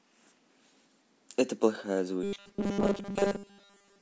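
From 2.23 s to the end, new audio likely arrived too seldom, so short buffers were replayed over most of the missing sound. A 200 Hz buzz suggests 5 ms repeats, giving robotic sound from repeated short buffers: a rigid metallic drone loosely tracking the speech.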